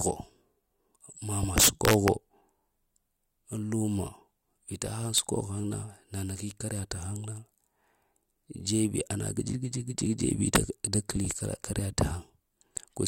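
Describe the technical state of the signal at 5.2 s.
A violent, sharp crack hits the speech at 5.18 s, far harsher than clipping would sound. It's integer overflow: a loud peak pushed about 2 dB past the largest integer value, and instead of being limited, it wrapped around to the opposite sign, flipping across the full range.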